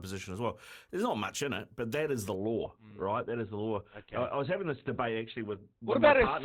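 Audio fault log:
2.35 to 6.45 s, adaptive stream at a lower bitrate: the player suddenly switches to a much leaner encoding, consistent with a drop from about 64 to 12 kbit/s Opus. With nothing above 4.2 kHz, the speech turns muffled and grainy, without any gap at the switch.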